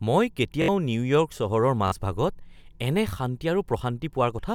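Repeated buffer at 0.62 s and again at 1.88 s: new audio failed to arrive in time, so the playback device replayed its last chunk, about 21 ms long, which fits a 1024-sample buffer. At 0.62 s the chunk sounds four times in a row, with a hard join at each restart, giving a brief stutter in the speech and dropping roughly 70 ms of audio. At 1.88 s it sounds three times, a shorter stutter that loses about 40 ms.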